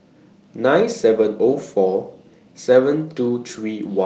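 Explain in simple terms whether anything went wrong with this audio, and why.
Nothing went wrong with the signal: the speech arrives whole and steady over what sounds like an ordinary call connection, with the slightly muffled top end such a link gives, as it tops out around 8 kHz.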